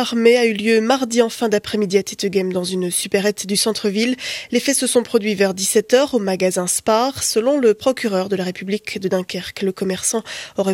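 No technical faults are audible.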